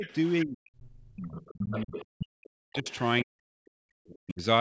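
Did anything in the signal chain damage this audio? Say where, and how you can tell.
Yes, at the call-processing stage, where the echo canceller handles double talk. Speech suppressed in double talk shows as a shallow dip of about 10 dB over the first 0.06 s, then deep cuts of about 40 dB from 0.45 to 1.12 s, 1.53 to 2.88 s and 3.23 to 4.41 s. The canceller likely mistook the near talker for loudspeaker echo while both sides spoke, and turned everything down. A network dropout would leave abrupt silent gaps. Here the level is pulled down through stretches of ongoing speech instead.

The other side's voice leaking through is the same stage failing the opposite way. A second, separate voice sits about 20 dB below the talker from 0.03 to 0.31 s, rises to about 10 dB below from 1.16 to 2.06 s, and returns at about 20 dB below from 2.73 to 2.98 s. This is likely loudspeaker sound that the canceller failed to subtract from the microphone. 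Room reverberation would only smear the talker's own sound. This is a different voice.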